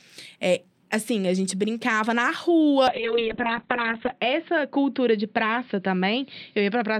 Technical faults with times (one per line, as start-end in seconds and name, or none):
2.88-6.99 call bitrate drop